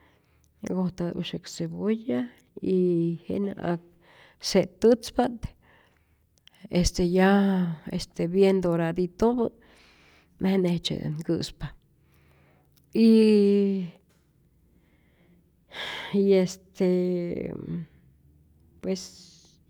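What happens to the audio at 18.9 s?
Nothing goes wrong at 18.9 s; the audio is intact at that point.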